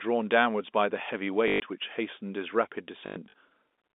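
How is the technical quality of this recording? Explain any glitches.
The recording has two dropouts, both caused by packet loss with the last packet repeated. The speech is carried over a G.711 telephone line, band-limited to roughly 250 Hz to 3.6 kHz.

From 1.48 to 1.60 s, 120 ms of audio went missing. The receiver replayed the last packet to fill the gap. From 3.06 to 3.34 s, 160 ms was lost in scattered bursts, the longest about 100 ms. The repeats ignore the pitch. The runs buzz at about 50 Hz, which fits 20 ms packets, and they sound like a brief robotic stutter.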